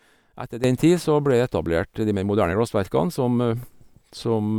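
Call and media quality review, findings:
Sudden gain jump at 0.64 s, persisting to end of clip. Speech and noise floor step up together by about 12 dB. Likely cause: gain setting or bit shift applied without ramp. Waveform shows abrupt envelope step; spectrogram brightens uniformly across all frequencies.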